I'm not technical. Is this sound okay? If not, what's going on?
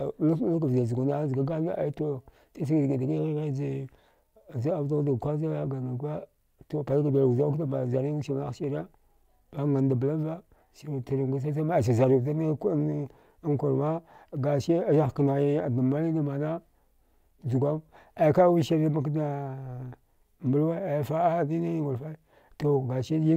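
Yes, this one's fine: nothing in the recording sounds broken or glitchy, so there's nothing here you need to worry about.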